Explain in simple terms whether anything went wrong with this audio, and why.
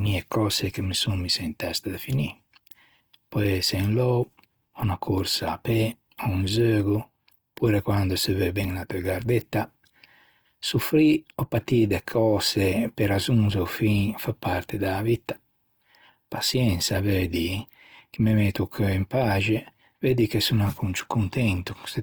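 Throughout the whole clip, the speech sounds rough and grainy, as if fine noise were woven into it. That points to Opus compression, most likely squeezed hard. Unlike MP3 damage, there is less watery swirling, and the high end stays bright and full.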